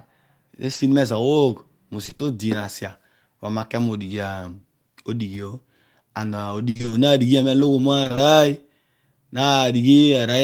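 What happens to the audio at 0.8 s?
Short concealed packet loss runs from 0.73 to 0.81 s, as two back-to-back gaps of 20 ms each, at 0.73 to 0.77 s and 0.77 to 0.81 s. Those stretches of the call arrived too late for the decoder, so the receiver patched each hole by extending the preceding speech, carrying its pitch forward if voiced or substituting shaped noise if not, then easing back into the real signal. It comes across as a brief smear or wobble.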